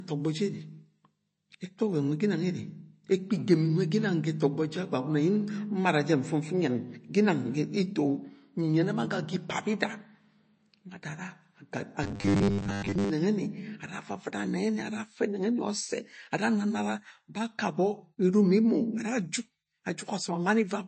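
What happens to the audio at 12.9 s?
Robotic sound from repeated short buffers runs from 12.04 to 13.10 s, so 12.9 s falls inside it. New audio likely arrived too seldom, and the last short slice was replayed to fill the gaps, with most of that stretch being repeats rather than fresh speech. The repeats impose a rigid, metallic 100 Hz buzz, which fits a 10 ms buffer, and the speech only roughly follows its own contour.

MP3 compression damage is plainly audible at that moment, as it is through the whole clip. The encoder was likely starved of bits, which points to about 34 kbps, so it removed everything above 8.3 kHz and dropped weak spectral detail, leaving the speech dull and smeared with codec artefacts.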